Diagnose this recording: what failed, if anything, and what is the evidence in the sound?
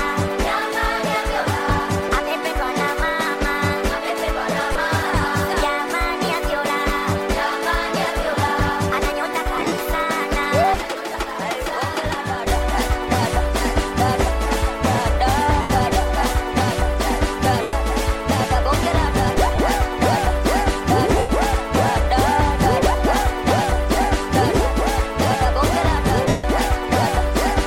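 Lost LE Audio frames on the Bluetooth link. Short dropouts at 4.73–4.76, 9.57–9.72, 11.12–11.15, 15.61–15.70, 17.61–17.73, 19.56–19.58, 21.18–21.29 and 26.28–26.44 s turn into a noisy smear. The 22.5 ms gaps fit three 7.5 ms frames. The LC3 decoder fills each gap by repeating the last spectrum with random signs. It fades the longer gaps, which run up to 150 ms. The gap around 9.6 s is broken up across 150 ms. The light lossy compression sits underneath.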